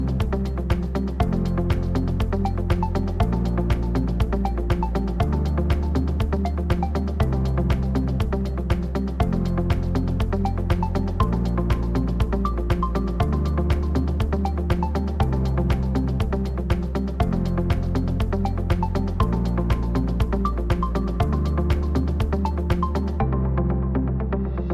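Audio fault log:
Nothing to log here: the audio runs without a single technical fault worth noting.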